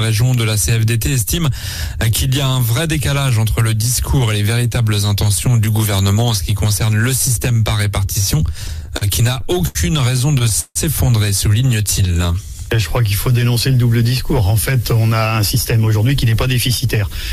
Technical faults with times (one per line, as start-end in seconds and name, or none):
8.67-9.77 repeated stalls (stutter)
10.19-10.77 repeated stalls (stutter)
11.68-13.30 jitter buffer slow-down
15.13-17.06 jitter buffer speed-up